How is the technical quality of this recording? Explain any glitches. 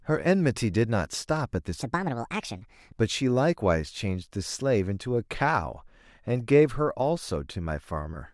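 One glitch stands out in the speech. From 1.82 to 2.93 s there is a section at the wrong speed: the audio runs 1.48 times too fast, so pitch rises by roughly seven semitones and the talker sounds chipmunk-like and rushed, then snaps back to normal. This is likely from that stretch being played or resampled against the wrong clock. It differs from a pitch-shift artefact because tempo and pitch jump together, with no smearing or warbly processing.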